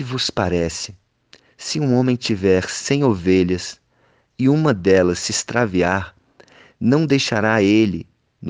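From 0.10 s to 8.46 s the speech carries clock slip clicks. These are faint ticks at roughly 70 ms intervals, merging into a soft rattle. Each is a single-sample jump. The likely cause is two unsynchronised clocks drifting apart by around 400 ppm.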